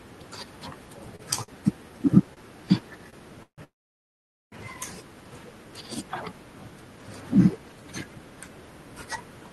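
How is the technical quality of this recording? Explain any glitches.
The recording has two network-related glitches in the speech: a run of stutters early on, followed directly by a short freeze. Both sit on top of a call codec that band-limits the sound to about 12 kHz.

From 0.97 to 3.61 s there are repeated stalls (stutter). Packets kept arriving behind schedule, so the jitter buffer ran dry six times. The receiver stretched the last sound to fill about 0.3 s in total, with the longest gap about 150 ms. Nothing is lost, but the speech drags and hiccups.

From 3.64 to 4.55 s there is a call audio freeze. The sound stops for about 0.9 s, and most of that, about 0.83 s, is silence before the speech resumes where it left off. The likely cause is packets held up in transit, which emptied the jitter buffer and added delay without removing anything.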